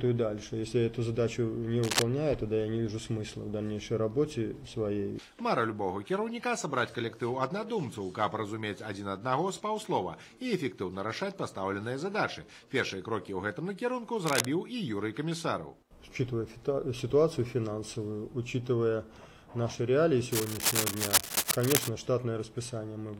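At 1.83 to 2.02 s, 14.26 to 14.45 s, and 20.32 to 21.89 s there's cable scratch noise: ragged crackly rustling about as loud as the sound itself. It's likely a worn cable or connector being moved, with its contact flickering.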